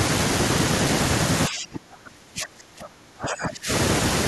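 From 1.48 s to 3.7 s, the speech is suppressed in double talk. The level falls away for roughly two seconds, sinking by about 30 dB at its deepest. The likely cause is an echo canceller mistaking this talker for loudspeaker echo during overlap.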